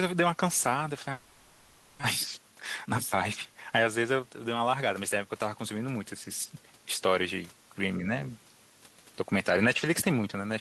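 From 1.11 to 2.05 s the speech gives way to a smeared, fading buzz lasting about 0.92 s. This is most likely a long network dropout: the receiver stretched its last good sound to cover the gap. Unlike a brief packet loss, about 600 ms of speech never returns.

From 2.36 to 4.63 s the jitter buffer speed-up is audible: speech runs about 12 percent fast and sounds hurried. Pitch stays put, which separates this from a resampling fault. Trimming short pitch-period pieces removes roughly 0.3 s, the delay built up during the dropout.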